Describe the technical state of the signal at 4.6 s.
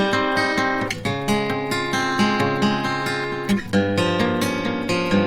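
Opus compression colours the music at this point, as it does across the whole clip. Tones sound rough and grainy rather than clean, with a noisy texture where detail should be, which fits a low rate around 24 kbps in its music mode. Bands short of bits are likely filled with folded or noise content, so the spectrum stays full up to about 20.4 kHz without the swirling, hollow holes typical of MP3.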